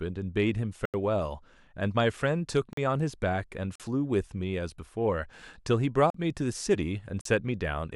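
At 0.85, 2.73, 3.76, 6.10 and 7.21 s the speech cuts to blocks of digital silence, 85 ms first, then 43 ms each, which fits unfilled 4096- and 2048-sample buffers. Abrupt cuts at both edges, with no fade or concealment, set these apart from network dropouts.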